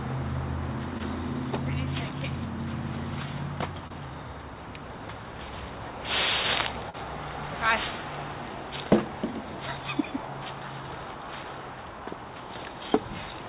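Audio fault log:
0.98–1.01 s, 3.87–3.92 s and 6.90–6.96 s: short concealed packet loss. Chunks of 20, 20 and 40 ms arrived too late to decode, so the receiver stretched the preceding sound over each hole, either from its pitch or as shaped noise, then blended back, giving a brief smear or wobble.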